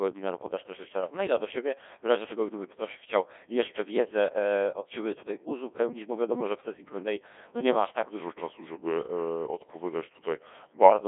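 The whole clip passes through a Codec 2 vocoder. Only pitch, voicing, energy and a spectral envelope survive. The speech is rebuilt from sine waves. It sounds robotic and buzzy, which fits a 1.6 kbit/s mode. Damage is heavy. The band runs 250 Hz to 3.6 kHz, with nothing above 3.8 kHz.

From 6.93 s to 7.89 s, just after "wiadomo że w sesji", GSM signalling bursts intrude. A nearby 2G phone is signalling, and the audio circuit rectifies its radio bursts. The result is a galloping dit-dit-dit of short 217 Hz buzzes, faint, roughly 25 dB below the speech.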